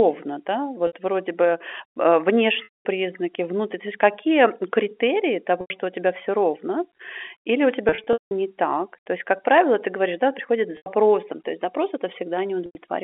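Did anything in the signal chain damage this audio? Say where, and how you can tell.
Yes. At the network stage, packet loss with pitch repetition at 0.87, 2.64, 5.61, 7.89–8.31, 10.77 and 12.66 s. The receiver repeats the last pitch period, giving buzzy held sound. The longer 0.21 s and 7.89 s gaps fade toward silence.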